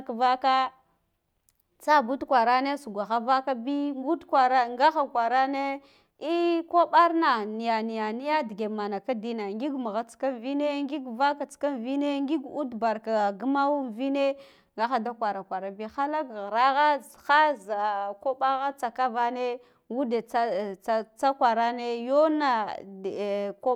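No technical faults can be heard anywhere in this recording. The speech runs without any dropout, glitch or break in the signal.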